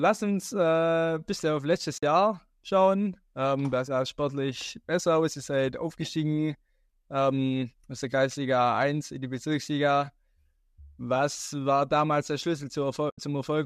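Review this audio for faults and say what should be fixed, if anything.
AAC frame loss with muting occurs at 1.98 to 2.03 s, just after "äh bis auf letztes", and again at 13.10 to 13.18 s. The speech drops into brief soft-edged silences of about 50 ms and 80 ms, which fits runs of five and eight lost 10 ms frames. The decoder zeroed the missing spectra, and the overlapping windows faded the sound down and back up, so the gaps have rounded edges. The light low-delay character is likely the AAC-ELD coding itself and is not a fault. To prevent the dropouts, protect the stream against packet loss with forward error correction or retransmission, and replace muting with concealment that extrapolates from neighbouring frames.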